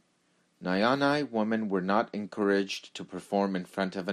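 Throughout, the speech sounds dull, with a gurgling, grainy edge and flickering highs, likely MP2 compression starving its sub-bands of bits, fitting a rate near 80 kbps.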